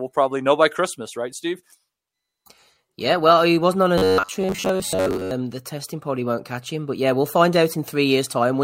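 From 3.98 to 5.33 s the speech goes robotic, the classic robotic sound from repeated short buffers. It's most likely the audio not arriving often enough, so the playback side keeps looping the last slice, about 10.7 ms here, for most of that stretch while the real audio gets skipped. That loop pins a buzz at roughly 94 Hz, so the voice turns into a stiff, metallic drone that only loosely tracks what's being said.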